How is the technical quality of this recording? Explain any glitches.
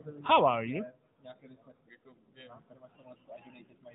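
No glitches or faults are audible anywhere here.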